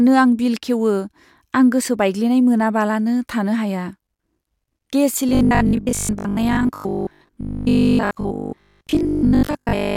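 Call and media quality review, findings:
Robotic sound from repeated short buffers, 5.29 s to end of clip. Speech collapses into rigid metallic buzz at a fixed 50 Hz. Likely cause: jitter buffer or playout starvation, with about 20 ms segments replayed for roughly most of the interval. Differs from codec warble: the pitch stays fixed rather than drifting, and the speech contour is only roughly preserved.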